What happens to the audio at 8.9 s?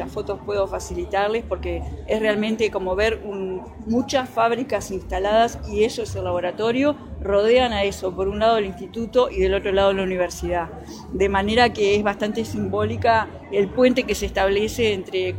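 Nothing goes wrong at 8.9 s; the audio plays straight through that moment with no audible fault.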